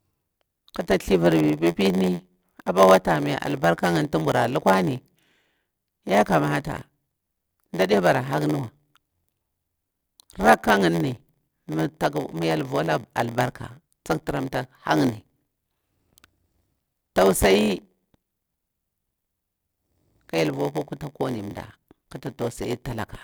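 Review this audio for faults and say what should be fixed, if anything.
From 0.56 s to the end, the speech carries a block size mismatch (padded): each block written is shorter than the block read, which fits a 512-sample read block, and the shortfall is filled with silence. Those regular gaps produce a steady 86.1 Hz buzz and slow the speech to 0.938 times normal speed. A waveform shows evenly spaced flat dropouts, and a spectrogram shows thin vertical gaps with harmonic lines at 86.1 Hz multiples. To prevent it, match the writer's and reader's block sizes, or buffer the stream so each read waits for complete data.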